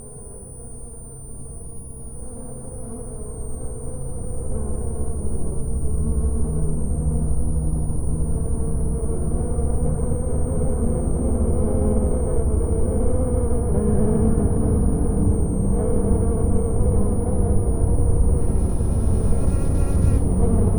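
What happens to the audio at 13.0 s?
At 13.0 s you're hearing a switching supply whistle, though it isn't specific to that moment; it runs under the audio for the whole clip. A switching power supply is cycling in an audible burst mode or beating against another supply, and that leaks in as a thin high whistle wandering between about 8.71 and 9.71 kHz. It sits roughly 25 dB below the main signal.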